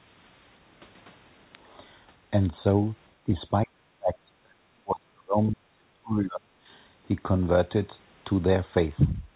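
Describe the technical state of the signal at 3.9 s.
At 3.9 s you're inside a stretch from 3.24 to 6.68 s where the speech gets pushed down, likely speech suppressed in double talk. The canceller can't tell the talker from loudspeaker echo, so it ducks everything, dipping as much as about 35 dB.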